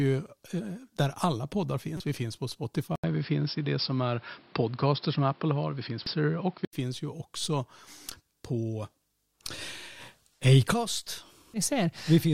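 Damaged data in the compressed stream hits first, from 1.97 to 2.00 s, just after "där alla poddar". The decoder misreads the broken frames, loses sync and hunts for the next valid header, so the speech briefly breaks up there.

From 2.96 s, after "finns på", the sound most likely reflects the input being switched to a poorer device. An 80 ms gap of silence marks the switch, and then the band narrows so that nothing reaches above 5.4 kHz, which leaves the speech dull and boxy. A different background noise sits far below the speech, and the level shifts by around 5 dB. Full bandwidth returns at 6.73 s, at "finns ju också".

Two more points of damaged data in the compressed stream fall at 6.06 s, inside the narrowband stretch, and at 11.54 s. At each, a corrupted frame makes the decoder lose its place, and the sound briefly breaks up.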